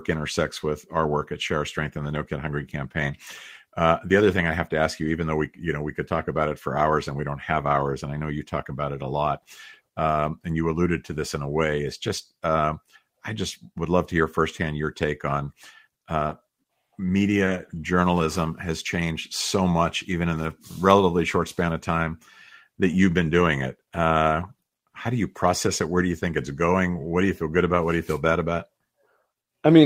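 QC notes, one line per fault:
16.27–16.31 s and 17.45–17.49 s: short concealed packet loss. About 20 ms of the call arrived too late for the decoder each time. The receiver covered each gap by extending the preceding sound, following its pitch where voiced and using shaped noise where not, then crossfaded back into the real signal. Each gap is heard as a brief smear or wobble. The second falls just before "journalism has changed so".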